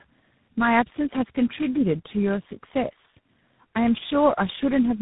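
Speech passed through tandem speech coding: it sounds rough, muffled and warbly, with nothing above 3.8 kHz, consistent with three speech codecs in a row, each recoding the previous one's degraded output. From 3.86 s to the end, distortion appears, and pauses fill with noise, likely from a stuck bit in the sample data.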